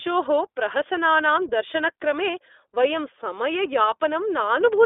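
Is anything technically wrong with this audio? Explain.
Yes. Throughout, the speech passes through the iLBC codec: each independently coded frame (fitting 20 ms frames at 15.2 kbps) sounds rough and synthetic, and a spectrogram shows nothing outside 300 Hz to 3.7 kHz.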